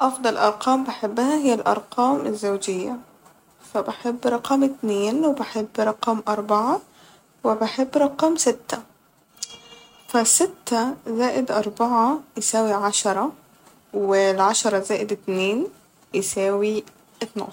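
Nothing technical goes wrong anywhere in this speech recording, so there's no fault to point to at any moment.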